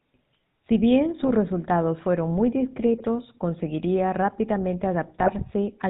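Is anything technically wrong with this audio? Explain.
Yes. The speech runs through the GSM full-rate codec for its whole length, at a quality that fits 13 kbps. The vocal tract is modelled and driven by sparse, regularly spaced pulses, giving a buzzy, gravelly roughness. A spectrogram shows nothing above 4 kHz and coarse, grainy harmonics.

GSM bit errors corrupt the decoder's filter, pitch and gain values at 1.23–1.31 s (just before "resultados fueron muy"), 2.98–3.05 s (before "conseguiría rápidamente") and 5.19–5.30 s (after it). Each brief burst squawks or gargles, showing as smeared spectral blotches and sudden waveform level spikes.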